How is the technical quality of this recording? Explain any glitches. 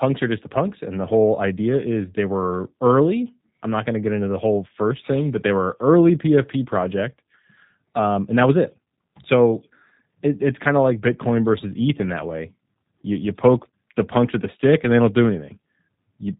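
The technical quality is limited by low-bitrate voice coding. G.729 codec damage is plainly audible for the whole recording. The speech is rebuilt from a vocal tract filter, a pitch predictor and a few pulses per frame, at a rate that fits 8 kbit/s. Nothing above 3.8 kHz survives. The result sounds narrow, slightly rough and synthetic.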